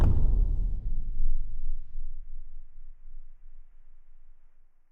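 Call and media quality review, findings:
Call bitrate drop, 2.72 to 3.99 s: sound turns rough and watery, top end muffled, for about 1.2 s, then clean again. Probable component: encoder rate control after a bandwidth estimate fall, which fits a drop from 96 to about 22 kbps. Coarser coding plus band-limiting at that rate. Unlike packet loss, there are no gaps, clicks or repeated fragments. The degradation is continuous and ends cleanly.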